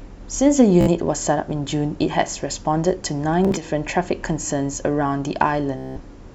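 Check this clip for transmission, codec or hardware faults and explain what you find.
The clip has a transmission fault: Bluetooth stutter in three places, at 0.81 to 0.88 s, 3.45 to 3.64 s, and 5.78 to 6.00 s. Packets of the wireless stream were dropped or arrived too late, so the receiver kept replaying its most recent short slice of audio until fresh data arrived. The first gap spans about 61 ms and the second about 76 ms, broken into pieces across roughly 122 ms with no single run longer than about 31 ms. The last is the longest, about 183 ms, which points to a string of consecutive lost packets. In each case a short slice of the speech repeats, then picks up further along, with the missing stretch skipped.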